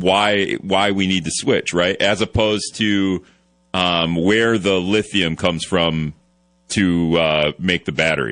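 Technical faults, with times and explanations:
Throughout: MP3 compression, plainly audible as watery, swirling speech with chirpy s sounds. Weak frequency lines drop in and out frame to frame, which fits a low bitrate around 40 kbps. The shifting, metallic texture sets it apart from simple band-limiting, which stays steady.
7.95 s: pre-echo, a hiss rising about 13 dB and spreading 27 ms ahead of a sharp attack, which then sounds softened. The coding noise fills the quiet gap before the onset, which points to a 52 ms block with no switch to short blocks. Unlike reverb or echo, it comes before the sound.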